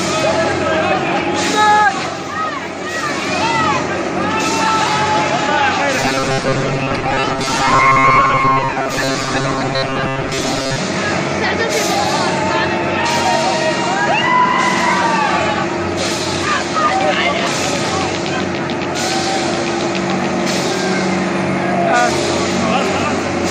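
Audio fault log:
5.99–10.78 s, robotic sound from repeated short buffers: the audio turns into a rigid, metallic buzz fixed at 134 Hz that only loosely tracks the underlying sound. This is likely from audio arriving too seldom, so a fragment of about 7.5 ms is looped to fill gaps, with roughly half the material replaced by repeats. A spectrogram shows evenly spaced harmonic lines at multiples of 134 Hz, and the waveform shows identical short cycles repeating.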